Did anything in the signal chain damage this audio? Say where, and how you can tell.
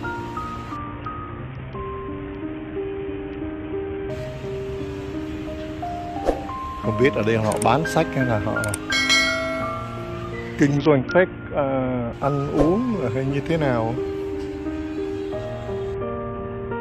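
Yes. Dull treble and gritty noise at 0.76–4.10 s, 10.77–12.13 s and from 15.94 s onward point to a codec-stage Bluetooth SBC bit pool drop, consistent with a bit pool cut from 31 to 6, near 55 kbps.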